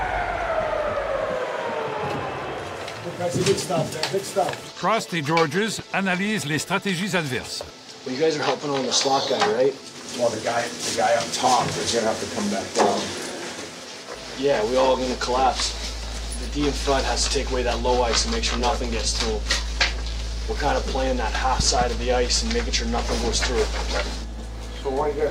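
A loud pop lands at 5.79 to 5.82 s, and a second loud pop event at 21.60 to 21.84 s arrives as two pops in quick succession, each peaking roughly 10 dB above the surrounding sound, which carries on underneath. The likely cause is a sudden voltage step or pulse, from a plug, switch, static discharge or driver glitch, that entered the signal path and was shaped by the circuitry downstream.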